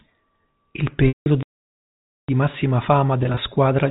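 Telephone-band speech, cut off above 4 kHz as G.711 coding does, with two bursts of packet loss with pitch repetition. From 1.08 to 1.26 s, 180 ms of audio is missing: the last pitch period loops as a buzzy, held tone, fades to silence, then cross-fades back. From 3.23 to 3.37 s, just after "massima fama", 90 ms is lost in short gaps of at most 20 ms each, which sound like brief buzzy catches rather than silence. A playback stall runs from 1.43 to 2.29 s, about 0.86 s of dead silence, likely from the player running out of data or its thread being blocked, before the sound resumes on "massima fama". The stall stops abruptly with no looped buzz or fade, which sets it apart from the concealed losses.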